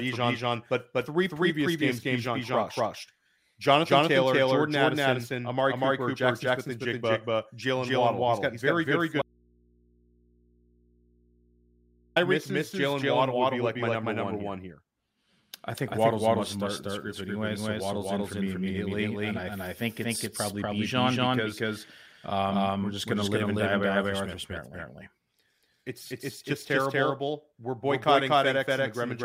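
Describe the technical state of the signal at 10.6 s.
An audio dropout to a faint residue runs from 9.22 to 12.16 s, right after "got very good". The signal was likely lost while the path stayed live, leaving only mains hum about 35 dB below normal level. A doubled audio track runs through the whole clip. A second full-level copy of the sound trails about 200 ms behind the original, likely from a duplicate capture path.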